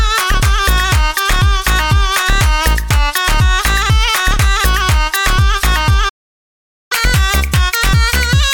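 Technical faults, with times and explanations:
6.09 to 6.92 s, playback stall: the sound just cuts out mid-flow for about 0.82 s, then picks up again. That dead gap most likely means the player ran dry of data or its thread got blocked, so nothing reached the output.
6.92 s to the end, catch-up at higher speed: right after the gap, everything runs at 1.25 times normal speed and sits about four semitones sharp. The player is resampling its backlog faster to win back the lost time, so pitch rises along with tempo.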